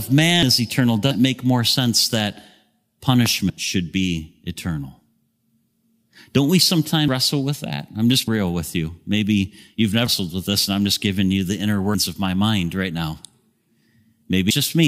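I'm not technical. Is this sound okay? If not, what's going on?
No, it isn't. The speech keeps skipping forward at 0.43, 1.11, 3.50, 7.08, 8.28, 10.07, 11.95 and 14.51 seconds. Each time, a chunk of sound is simply missing, from about a tenth of a second up to nearly a third of a second at 8.28 and 10.07 s. This is a dropped buffer (overrun). Likely the recording program fell behind and the sound waiting to be saved was overwritten before it could be collected.

There is also a single sharp loud pop from 3.26 to 3.28 seconds, clearly louder than the speech, which carries on underneath it. That kind of pop likely comes from a sudden electrical jolt, such as a plug, a switch, static or a momentary hiccup in the sound hardware.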